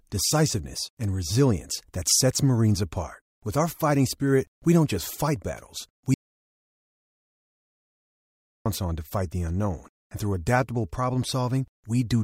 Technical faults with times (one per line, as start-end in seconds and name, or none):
6.14-8.66 audio dropout to silence